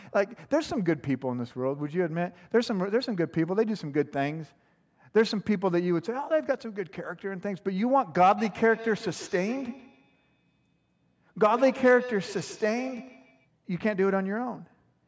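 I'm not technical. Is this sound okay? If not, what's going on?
No, not quite. From about 8.4 to 13.5 seconds there's a feedback echo between two devices. Two gadgets in the same room are on one call, so one plays out what the other's microphone sent, and that microphone hears it all over again. Each echo canceller only removes its own device's sound, so the repeat slips through. You hear the speech come back roughly every 0.15 seconds, quieter than the talking, sounding thinner and a bit ringy.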